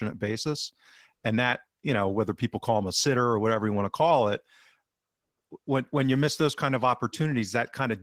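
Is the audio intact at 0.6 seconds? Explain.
No. Opus voice compression at 16 kbps runs throughout, including 0.6 s. Coarse SILK coding with a thin CELT layer above 8 kHz sounds hoarse and muffled. On a spectrogram, the upper band shows blocky, smeared 20 ms patches.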